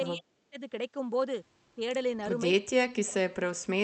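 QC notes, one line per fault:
0.14–0.59 s, 1.75–1.80 s and 2.51 s to the end: speech suppressed in double talk. The level gets pushed down in chunks: deep dips of about 35 dB in the first stretch, a brief shallow dip of about 10 dB around 1.75 s, then a heavy cut reaching about 40 dB in the stretch to the end. That pattern is likely an echo canceller mistaking the near talker for loudspeaker echo while the far side was also talking, and ducking both.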